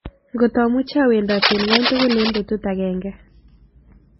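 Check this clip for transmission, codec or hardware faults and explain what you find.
Two faults are audible in this speech: a stacked lossy-codec sound across the whole clip, and a burst of scratchy noise in the middle.

Throughout, the speech carries the marks of transcoding between lossy codecs. Nothing is present above 5.6 kHz, and the artefacts of a very low-rate first encode are heard together with those added by a second encode. This fits a 16 kbit/s MP3 likely re-encoded to WMA at around 64 kbit/s. The later stage cannot restore the lost band and spends bits reproducing the earlier damage. Unlike a single low-bitrate encode, two distinct kinds of artefact are heard together.

From 1.28 to 2.38 s there is cable scratch noise: dense, uneven crackling and rustling laid over the speech at roughly the same loudness as the speech itself. This sound is likely caused by a worn cable, connector or control being moved, so that its contact resistance jumps rapidly. 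Unlike clicks from dropouts or digital errors, it is a continuous, irregular scratching that starts and stops with the disturbance rather than isolated sharp ticks.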